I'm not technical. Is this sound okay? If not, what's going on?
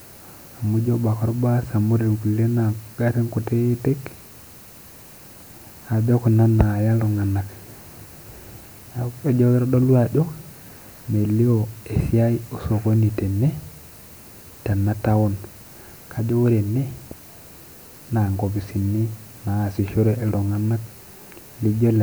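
No. The whole clip has low bit depth with noise shaping: the speech is stored with only 9 bits, so a thin hiss sits underneath, strongest in the highest frequencies.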